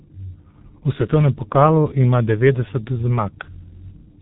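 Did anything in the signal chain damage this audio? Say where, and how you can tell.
Yes. Throughout the speech the sound is muffled and hoarse, with consonants smeared together and nothing above about 3.8 kHz, so sibilants lose their edge. This is heavy damage at the codec stage, from the G.723.1 codec. It squeezes speech into very few bits per 30 ms frame and refreshes its model of the vocal tract slowly, which fits a rate near 6.3 kbit/s. Fast transitions blur, and a rough, hoarse texture replaces natural voicing.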